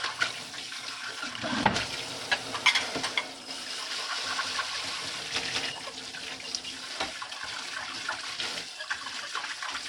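A recording of everyday sounds; from 3.48 to 5.72 s there's a doubled audio track, a second full-strength copy trailing about a fifth of a second behind, likely from a slower capture path.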